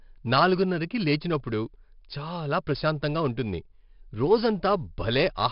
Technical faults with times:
0.00-5.52 4-bit ADPCM compression

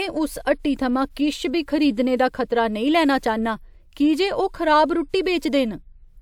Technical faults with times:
none

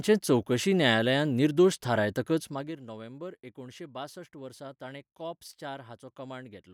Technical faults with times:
2.42-2.80 zipper noise

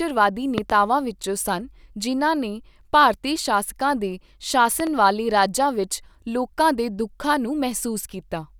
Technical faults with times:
0.58-0.72 loud pop
4.80-4.89 loud pop

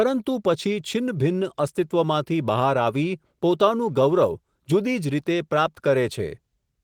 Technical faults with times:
none

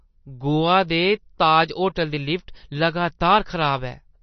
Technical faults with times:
0.00-4.23 MP3 compression

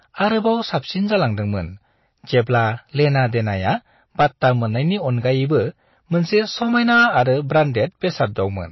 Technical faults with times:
0.00-8.71 hard clipping
0.00-8.71 MP3 compression

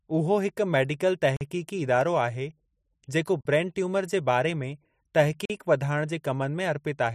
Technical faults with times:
1.36-1.41 gap between chunks
3.41-3.45 gap between chunks
5.45-5.50 gap between chunks

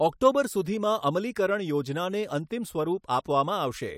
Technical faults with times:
none

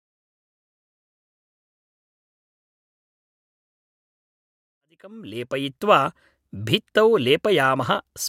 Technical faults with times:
none

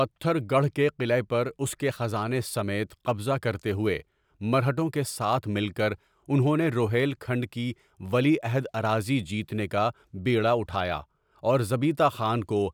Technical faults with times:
none

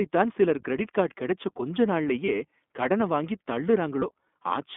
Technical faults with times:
0.00-4.77 iLBC codec
2.26-2.29 lost iLBC frames
4.00-4.04 lost iLBC frames

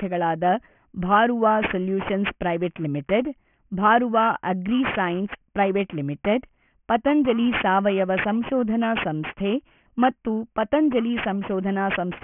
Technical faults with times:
0.00-12.24 aliasing

